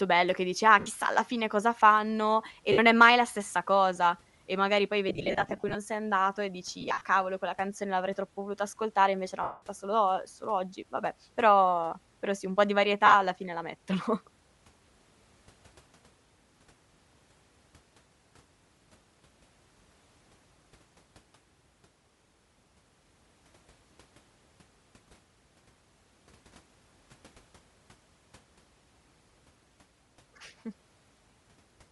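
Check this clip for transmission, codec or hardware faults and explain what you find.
Two faults are audible in this speech: a codec coloration across the whole clip and six short dropouts that are papered over with noise.

Bluetooth LC3 compression: throughout, the speech has a breathy, grainy edge and a hissy top end, where upper harmonics seem replaced by noise rather than carried cleanly. The likely cause is LC3, the LE Audio transform codec, running at a modest rate, consistent with about 48 kbps and 7.5 ms frames. At that rate it discards much of the upper spectrum and refills it with shaped noise.

Lost LE Audio frames: at 0.79–0.86 s, just before "alla fine cosa fanno", and at 2.72–2.78 s, just before "è mai la stessa", the sound briefly smears into a noisy buzz. The same smearing appears as a broken, stuttering patch from 5.09 to 5.76 s, with about 340 ms lost in scattered runs of up to roughly 40 ms. 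It comes again at 6.81–7.01 s, between "sei andato e" and "cavolo quella canzone l'avrei", with about 120 ms lost in gaps up to roughly 50 ms. At 9.42–9.62 s there is a solid 195 ms gap that smears and then fades away, and at 13.06–13.15 s the smear recurs. Each time the receiver missed frames, and the decoder concealed them by replaying the last spectrum with randomised signs. That turns voiced sound into noise, and on the longer gap the decoder fades the replayed spectrum out.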